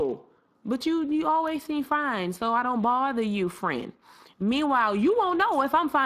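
Speech throughout sounds plainly rough and noisy from Speex codec compression, whose sound fits a bitrate around 22 kbps, with nothing above 15.3 kHz.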